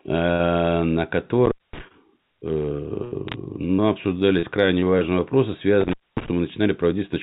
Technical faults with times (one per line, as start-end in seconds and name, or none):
1.45-1.80 intermittent contact
3.28-3.34 bit errors on a digital phone line
5.81-6.28 intermittent contact
6.47-6.53 bit errors on a digital phone line